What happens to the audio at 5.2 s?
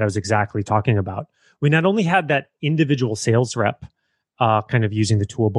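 Nothing goes wrong at 5.2 s; the speech there plays through intact, with no dropout, click or other fault.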